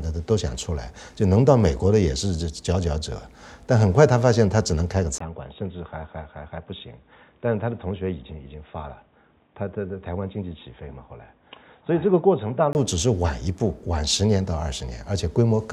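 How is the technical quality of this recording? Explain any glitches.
The recording has one clear fault. From 5.18 s to 12.75 s, the input was likely switched to a poorer device. After a 20 ms gap, the sound loses everything above 3.8 kHz and turns dull and boxy. It also gets slightly quieter and picks up faint new background noise, until it clears again.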